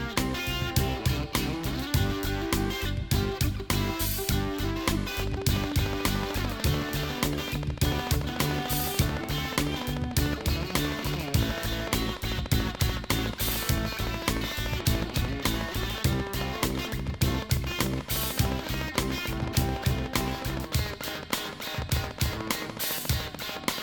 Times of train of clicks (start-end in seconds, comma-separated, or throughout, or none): 5.20-23.83